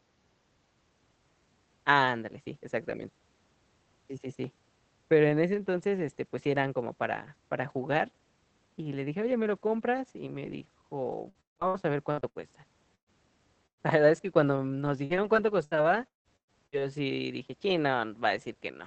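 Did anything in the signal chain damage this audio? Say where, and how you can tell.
Yes. Repeated packet loss (robotic sound) on the network at 11.29–12.38 s and 15.05–16.81 s, the second followed by "sí dije": concealment stretches the last sound, leaving it choppy and robotic.

Bursts of packet loss at 12.95–13.10 s and 13.67–13.83 s each drop about 120 ms. The held sound fades into brief silence, then resumes further on.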